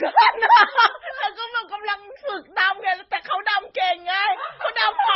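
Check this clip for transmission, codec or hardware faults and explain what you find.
One codec fault runs through the whole clip. Transcoding between lossy codecs, throughout: the speech was likely encoded by a low-rate MP3-like stage and then by Opus. Both codecs' smearing and swirl are heard together, and a spectrogram shows a hard ceiling at 5.7 kHz.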